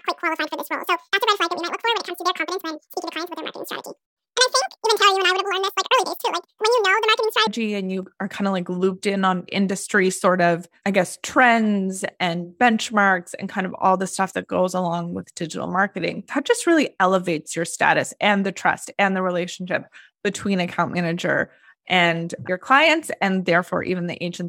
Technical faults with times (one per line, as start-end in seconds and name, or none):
0.00-7.47 audio read two samples at a time (double speed)